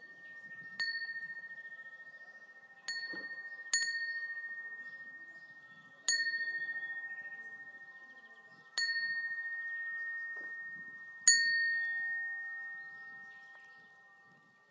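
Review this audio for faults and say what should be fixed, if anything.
No faults are audible in these sounds, so nothing needs fixing.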